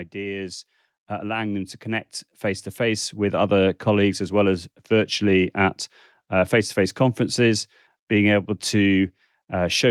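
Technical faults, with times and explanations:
0.12–3.68 s, automatic gain rising: the gain control judged the input too quiet and raised its gain by about 11 dB, so voice and background noise swell together until "colleagues as well as". The waveform envelope and spectrogram noise floor brighten steadily across all frequencies.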